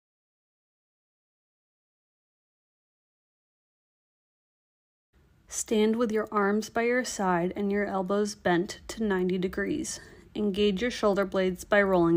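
Nothing stood out as a technical fault on listening.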